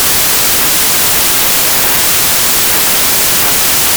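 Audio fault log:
throughout, wrong sample width: loud broadband noise with the speech buried inside it, running at 0.667 times normal speed and pitch. Packed 24-bit samples read as 16-bit give mostly mismatched byte pairs, with only some carrying the real signal's top bits.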